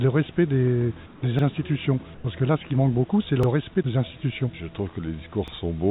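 From 1.06 to 1.22 s the real background drops out and is replaced by a flat, featureless hiss about 4 dB quieter. This is comfort noise in place of the background, likely from discontinuous transmission filling a silent stretch with synthetic noise. At 1.39 s a 44 ms stretch plays twice, giving a brief stutter. These overlapping chunks recur every 2 s, again at 3.43 s and 5.48 s, consistent with 2 s chunks each starting before the previous one ended. Between 2.14 and 2.24 s the comfort noise returns for 100 ms, about 5 dB below the surrounding background, all heard through a narrowband call path with nothing above 4 kHz.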